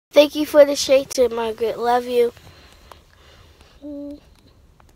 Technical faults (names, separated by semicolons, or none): block of digital silence